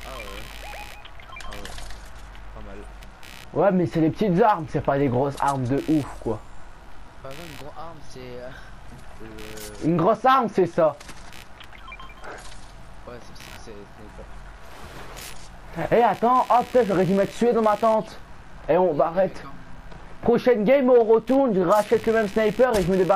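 Computer activity noise runs the whole way through: processor or mouse load is shifting the audio circuit's shared ground, so a buzzy, chirping pulse train near 70 Hz sits roughly 25 dB below the sound, shows as faint vertical striations across the spectrogram, and fluctuates independently of the programme.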